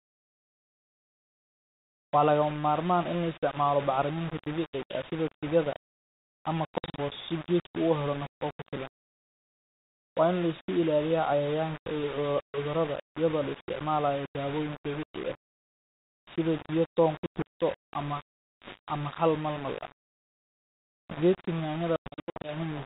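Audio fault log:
throughout: low bit depth without dither. Grainy distortion tracks the speech, with noise only about 15 dB below it, so quiet stretches turn gritty. The likely cause is coarse rounding with no dither, which fits roughly 4-bit samples.
4.84–4.95 s (after "isticmaalo bacriminta"), 6.78–6.99 s, 17.26–17.42 s (after "toon ku"), 21.96–22.55 s: packet loss on an ADPCM call. Hard-edged silent gaps of 60, 140 (scattered over 200 ms), 100 and 340 ms (scattered over 480 ms) appear on the 32 kbit/s G.726 link. Afterwards the decoder's predictor and step size lag the sender's, so speech resumes disturbed before settling.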